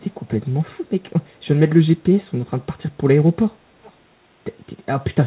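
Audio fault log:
3.83–3.92 s, echo leak: a brief, very faint copy of the speech lagging 413 ms behind the original and far quieter than it. The likely cause is a loudspeaker's output reaching its microphone and slipping past the echo canceller before being sent back.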